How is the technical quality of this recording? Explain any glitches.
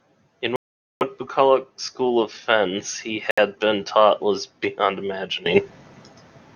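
The recording has two kinds of fault: two dropouts in the speech and an abrupt level change near the end.

From 0.56 to 1.03 s, and again from 3.31 to 3.39 s, the speech cuts to dead silence, for about 0.45 s and then about 67 ms, before resuming. These are Bluetooth stalls, likely caused by radio interference delaying packets until the headphone buffer emptied. Playback halts with no fade and restarts once retransmitted audio arrives, so the gaps sound like hard mutes.

At 5.46 s a sudden gain jump raises the level by about 14 dB, and it stays raised to the end. Speech and background noise step up together in a single sample, with no ramp. The abruptness points to a digital gain setting or bit shift being applied instantly, likely a level adjustment made mid-stream rather than a change at the source.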